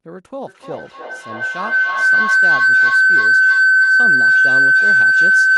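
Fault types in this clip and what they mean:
Feedback howl: a microphone-to-loudspeaker loop gaining level on each pass. From 0.47 s to the end, a tone near 1.5 kHz swells, with the loop repeating roughly every 0.3 s, and peaks about 16 dB above the speech. The spectrogram shows a bright horizontal line, and the waveform's envelope balloons.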